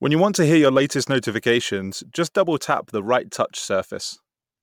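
A corrupt frame decoded at 1.91 to 1.94 s, just before "just double tap the", breaks into this speech clip as a short, brittle blip. Flipped bits in the compressed data led the decoder to misread gains and codes, so energy landed at the wrong frequencies for the span of the bad data. The roughly 30 ms length fits a couple of damaged frames, and the stray burst peaks at around -30 dBFS.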